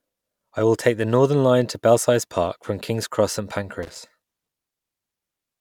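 Loose connector crackle appears from 3.83 to 3.98 s, a short irregular burst of scratching and crackle lasting about 0.15 s in the speech. A worn or dirty contact somewhere in the signal chain is shifting and repeatedly losing and regaining connection, so the audio is chopped into fragments during that moment, and any DC offset on the line turns each make and break into a small pop. The result is a ragged, gritty rasp laid over the sound.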